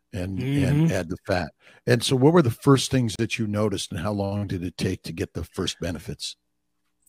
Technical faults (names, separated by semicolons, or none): Bluetooth stall